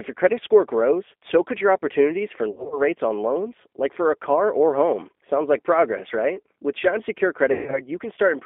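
G.729 codec throughout: the audio is confined to about 250 Hz to 3.5 kHz and sounds rough and synthetic, which fits an 8 kbit/s G.729A stream rebuilding speech from a filter and sparse pulses.

VoIP packet loss concealed by the speech codec at 2.51 to 2.81 s: about 150 ms of audio went missing in gaps scattered over 200 ms, the longest lasting 60 ms. The decoder stretched its last pitch and filter into a fading buzzy tone or coloured noise. At 7.52 to 7.82 s the same concealment runs longer: 170 ms missing, including one 140 ms gap, leaving a sustained, decaying buzz or noise.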